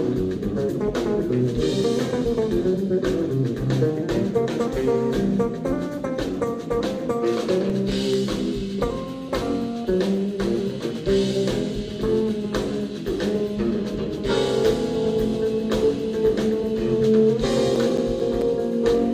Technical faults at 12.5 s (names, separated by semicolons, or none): none